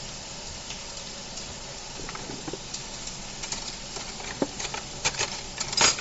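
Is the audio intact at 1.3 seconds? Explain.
No, at 1.3 seconds, as everywhere in the clip, there's a grainy, breathy edge with nothing above 7.7 kHz, likely Bluetooth LC3 compression at a low bitrate, around 32 kbps, noise-filling the missing highs.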